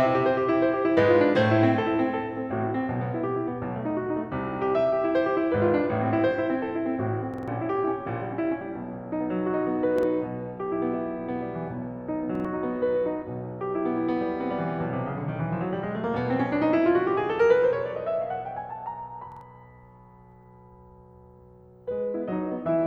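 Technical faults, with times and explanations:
7.34–7.48 s: repeated buffer. A 46 ms slice of music plays three extra times with hard joins, which fits a 2048-sample buffer arriving late. The stutter skips about 150 ms.
9.99–10.03 s: repeated buffer. The same 46 ms slice sounds once more when new audio arrives late, giving a brief hard-edged stutter. About 50 ms is skipped.
12.35–12.45 s: repeated buffer. One 46 ms slice repeats twice because the next buffer was late. Each join is abrupt, and about 100 ms of music is lost.
19.32–19.41 s: repeated buffer. Late audio makes the player replay a 46 ms slice twice. The hard joins stutter audibly, and about 100 ms is dropped.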